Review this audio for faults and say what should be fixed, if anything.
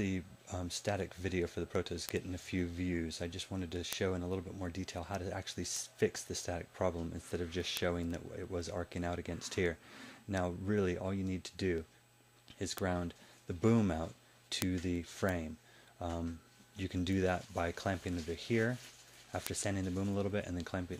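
Word clock ticks, 0.25 s to 20.97 s: clicks roughly every 0.15 s as an unlocked receiver drops or repeats one sample, its clock some 150 ppm off. Lock the receiving device to the sender's clock, or add sample-rate conversion at its digital input.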